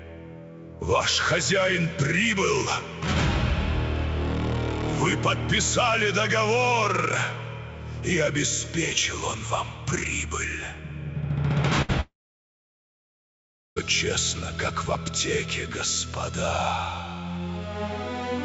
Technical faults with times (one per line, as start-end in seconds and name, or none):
11.82-11.91 burst of packet loss
12.01-13.78 long network dropout